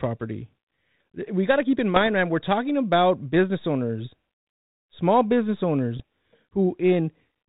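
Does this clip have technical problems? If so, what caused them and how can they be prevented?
Yes. Bit errors on an ADPCM link cause pops and rough bursts at 1.96 to 2.08 s (after "got to keep in", before "man we're talking about") and at 5.96 to 6.01 s (after "small business"). The band-limited sound fits a 32 kbit/s G.726 link. A flipped bit corrupts the decoder's step size and predictor, so each error rings on for milliseconds with brief level jumps. This rough, lingering burst sets it apart from the clean gaps of packet loss. The error rate sounds like a few tenths of a percent. Improving the radio link, or adding error protection on the channel, would prevent it.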